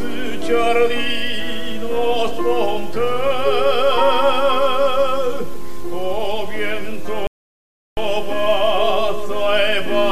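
At 7.27 s the player exhausted its buffered audio, a rebuffering stall: sound drops to silence until 7.97 s, then resumes exactly where it stopped, adding 0.7 s.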